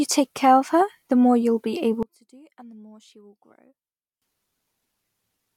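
A speech clip with one fault. From 2.03 to 4.22 s the speech drops by about 26 dB and turns faint. The likely cause is one channel inverted. With one stereo side's polarity reversed, the shared centre content cancels when summed to mono.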